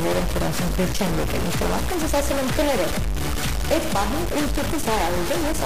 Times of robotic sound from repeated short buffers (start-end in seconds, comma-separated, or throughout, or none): none